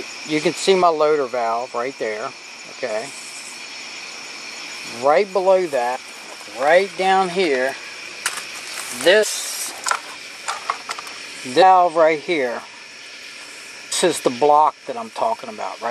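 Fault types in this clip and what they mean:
Damaged data in a compressed stream: some of the encoded bytes got mangled, so the decoder chokes on those frames and has to hunt for the next good header. Here you get five tiny blips, each about 20 ms, spaced fairly evenly across the clip.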